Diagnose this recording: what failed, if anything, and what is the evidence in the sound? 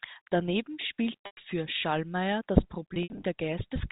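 The network stage dropped packets and the receiver's concealment filled the gaps by repeating the last pitch period. This is packet loss with pitch repetition. From 1.26 to 1.37 s about 110 ms is bridged, heard as a held, buzzy tone that decays toward silence before the speech cross-fades back. From 2.94 to 3.24 s, 160 ms goes missing in scattered bursts, the longest 70 ms, giving a stuttering buzz. The narrow G.711 telephone band carries through both events.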